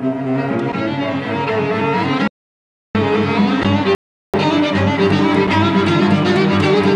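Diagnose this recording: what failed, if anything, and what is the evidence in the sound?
Audio dropout to silence at 2.28–2.95 s: the sound cuts to silence with no room tone, and about 0.67 s is lost, likely from an input link failing.

Rebuffering stall at 3.95–4.34 s: playback halts in silence, then resumes exactly where it stopped. The player's buffer ran dry, adding 0.39 s without losing any material.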